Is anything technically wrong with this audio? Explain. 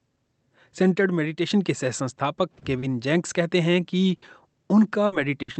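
Yes. The audio has two kinds of network fault, heard through a call codec whose spectrum stops near 8 kHz.

Short stall from a late packet, at 2.59 to 2.64 s and 2.79 to 2.85 s: a packet arrived late and the jitter buffer emptied, so the receiver stretched the last sound for 20 ms and then 30 ms. Nothing is lost, but each spot briefly hangs. A spectrogram shows flat, smeared bands; the waveform shows a small repeated stretch.

Burst of packet loss, at 4.16 to 4.25 s, 5.06 to 5.15 s and 5.42 to 5.51 s: each time about 60 ms of audio never arrived. The receiver extended the previous sound and faded it, then jumped ahead past the missing part. Each one is heard as a brief held buzz or fading hiss followed by an abrupt skip. A spectrogram shows frozen, dimming harmonics before a sudden change; the waveform shows a decaying envelope and a discontinuity where playback resumes.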